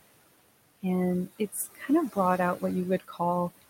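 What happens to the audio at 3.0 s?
From 3.0 to 3.2 s, speech is cut by the noise suppressor. It mistakes part of the speech for background noise and turns it down by as much as about 14 dB, so roughly a tenth of a second sounds swallowed and faint.

Noise suppressor artifacts are present here too, as they are throughout. The suppressor pulls steady noise down by about 21 dB, frame by frame, so the residual room noise, which sits about 12 dB below the speech, dips between the words and rises under them.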